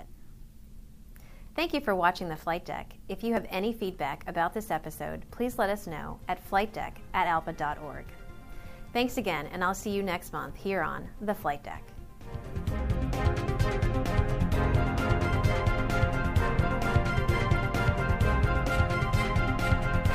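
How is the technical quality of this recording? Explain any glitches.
The recording has two brief glitches, both from overlap between stream segments. They fall at 3.37 s and 15.36 s. At each point the time stamps of two adjoining segments overlap. The player discards the overlapping stretch as if it were duplicated, but that audio was real. Roughly 10 to 20 ms of sound goes missing, and the waveform jumps across the gap. Each one is heard as a small click or tiny skip. Both sit on boundaries of 6-second segments.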